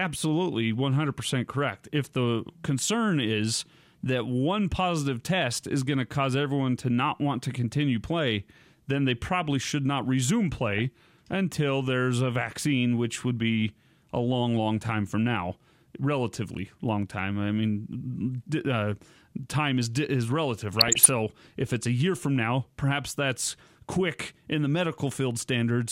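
Weak DAB reception let bit errors through the error correction into the MP2 speech data, corrupting sub-band samples and scale factors across roughly a dozen frames each time. The result is DAB burbling: short blips of noise in single sub-bands from 10.61 to 10.82 s, between "probably should not resume" and "until there's a vaccine", and from 20.78 to 21.06 s, between "time is is relative" and "if it's a year".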